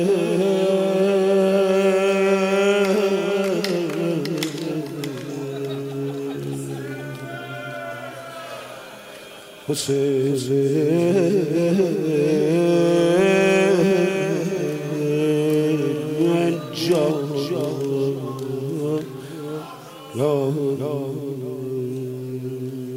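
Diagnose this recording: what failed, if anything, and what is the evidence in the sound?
No fault found in any stage.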